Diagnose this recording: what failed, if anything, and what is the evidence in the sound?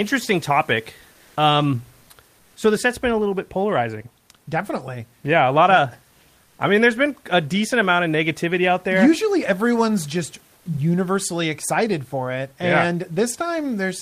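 The codec stage failed: comfort noise in place of the background, likely from the Opus encoder's discontinuous transmission. When its voice detector judged the pauses silent, it stopped sending audio and the decoder filled the gaps with synthetic noise. From 1.15 to 1.35 s the room noise, about 38 dB below the speech, gives way to generated noise about 2 dB louder. From 6.43 to 6.55 s, between "a lot of" and "I mean there's been", the substitute is about 2 dB quieter.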